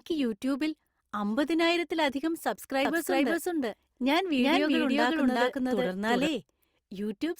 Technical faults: doubled audio track

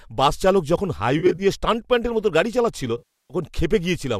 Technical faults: AAC frame loss with concealment

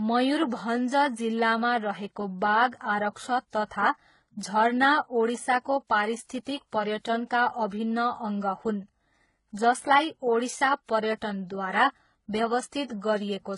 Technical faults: transcoding between lossy codecs

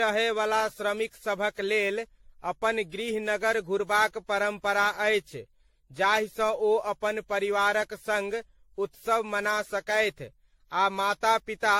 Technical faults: generation loss

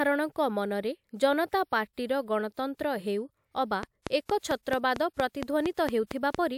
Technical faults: train of clicks

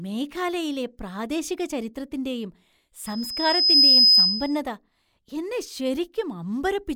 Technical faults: loudspeaker feedback squeal

